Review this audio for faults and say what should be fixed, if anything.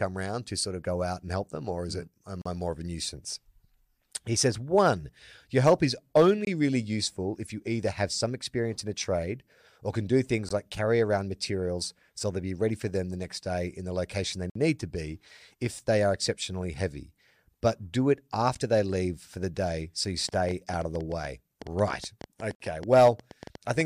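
Gap between stream segments: the speech drops to hard-edged silence at 2.42 s (38 ms), 6.45 s (22 ms), 10.49 s (18 ms, between "or can do things" and "like carry around materials"), 14.50 s (54 ms, between "in the location they" and "need to be if") and 22.55 s (53 ms). The roughly 4 s spacing fits segment boundaries whose timestamps don't meet, so the player pads the hole with silence. On a waveform each one is a flat-line notch; on a spectrogram it is a clean vertical blank band. Aligning segment timestamps at the packager so consecutive segments abut exactly would prevent it.

Train of clicks: from 20.29 s, just after "the day so you", to 23.82 s, about 30 similar pops tick over the speech at an uneven pace of around 8.7 per second, peaking about 5 dB above the speech itself. The likely cause is electrical interference or a faulty connection or power supply injecting pulses. A waveform shows sharp isolated spikes, and a spectrogram shows thin full-height vertical lines. 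Shielding or relocating the cabling and checking the connections and power supply would stop it.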